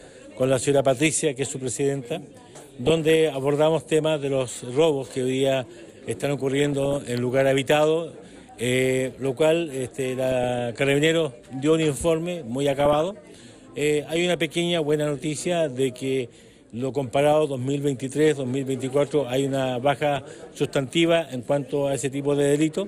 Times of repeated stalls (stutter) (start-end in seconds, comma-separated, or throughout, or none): none